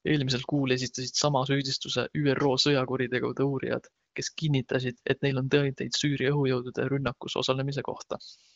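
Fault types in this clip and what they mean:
The speech comes through an AMR wideband (HD Voice) codec path with at most faint coding traces, which fits the high 23.05 kbit/s mode, and there is nothing above 7.8 kHz, as expected for wideband telephone audio.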